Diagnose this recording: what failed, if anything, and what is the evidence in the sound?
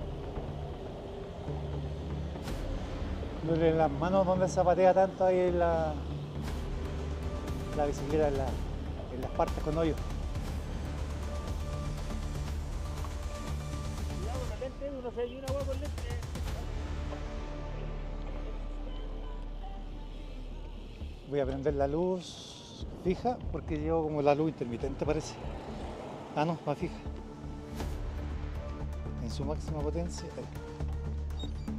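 Nothing in the chain failed: no stage from wiring through converter, buffer, format conversion, processing, network, storage or playback leaves any audible trace of trouble anywhere in the recording.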